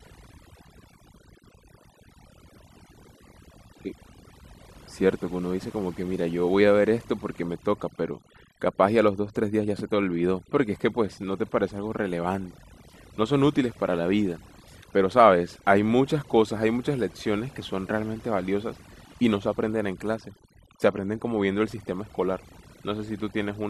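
A speech recording with overdone noise removal throughout: an over-aggressive noise reducer gates bands near its noise estimate, leaving near-silent gaps with twinkling specks. On a spectrogram, the background is mostly black, scattered with isolated bright dots, and the speech shows ragged, holed bands.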